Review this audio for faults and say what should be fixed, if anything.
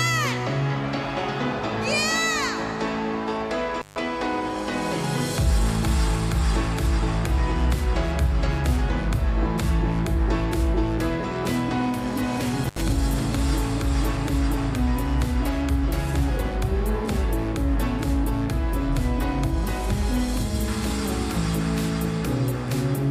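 Intermittent contact at 3.8–3.96 s and 12.64–12.81 s: a loose connector opens for 145 ms and 73 ms, leaving near-flat waveform gaps edged by broadband crackle.

Reseat or replace the suspect cable and plug, and secure it with strain relief before recording again.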